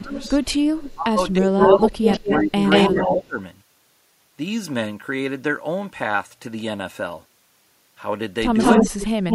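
Speech suppressed in double talk hits this speech clip from 0.0 to 0.1 s, 0.94 to 2.56 s and 2.9 to 3.38 s, with the voice dipping by as much as about 25 dB. The likely cause is an echo canceller that could not tell the near talker from loudspeaker echo while both sides spoke, so it attenuated both. Echo leak appears from 0.08 to 0.94 s as a copy delayed by 327 ms sitting about 15 dB under the speech, then from 1.59 to 3.16 s and from 8.58 s to the end as a 180 ms delayed copy about 5 dB louder than the speech, likely because a far-end speakerphone's canceller let part of its microphone pickup return down the line.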